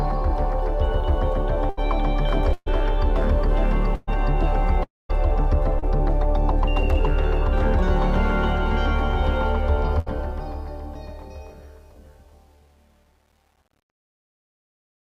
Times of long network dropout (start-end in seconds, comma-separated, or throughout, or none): 4.83-5.11